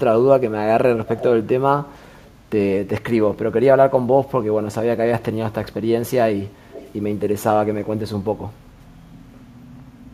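A speakerphone on the far side of this speech call, whose echo canceller is likely leaving part of its microphone pickup in place, causes echo leak: delayed copies trail the speech by 357 ms at 1.06–1.25 s (fairly strong) and 2.24–2.33 s (faint), and by 397 ms at 6.71–6.93 s.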